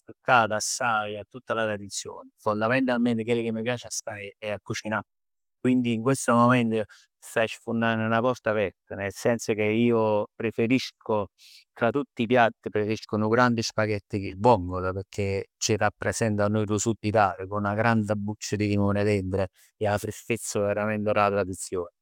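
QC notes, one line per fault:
Nothing stood out on listening to this speech recording.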